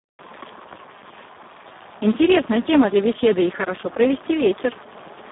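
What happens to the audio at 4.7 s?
At 4.7 s the speech carries the same Speex codec damage heard across the whole clip: a narrow 150 Hz to 3.6 kHz line band with nothing above 3.8 kHz, and a hoarse, noisy quality from starved excitation coding, consistent with a rate near 4 kbps.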